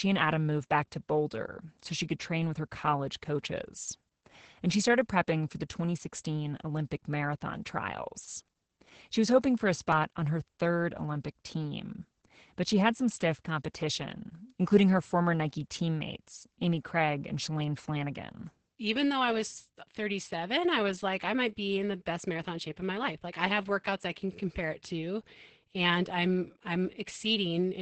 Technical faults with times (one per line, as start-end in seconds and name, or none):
0.00-27.82 Opus voice compression